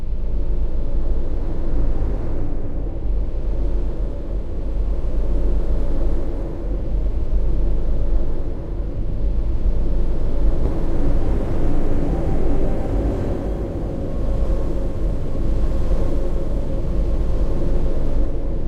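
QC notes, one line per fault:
10.66 s and 14.46 s, audio missing between chunks: the sound jumps abruptly at each point, with about a fifth of a second gone and the two edges butted together. The likely cause is a recorder working in 4-second chunks, dropping audio at each handover.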